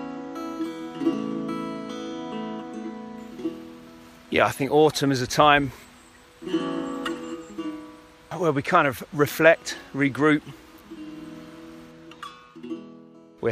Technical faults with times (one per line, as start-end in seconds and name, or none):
none